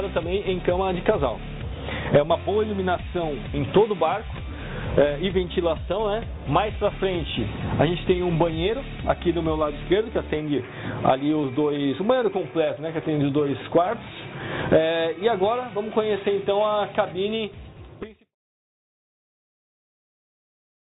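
There are no technical faults to describe in this audio.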